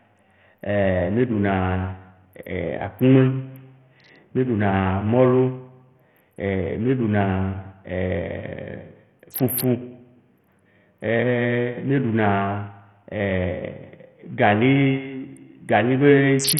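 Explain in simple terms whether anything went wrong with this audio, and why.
The speech sounds gritty and dull throughout, with nothing above about 16.6 kHz. Likely cause: heavy Bluetooth SBC compression, which starves the treble of detail.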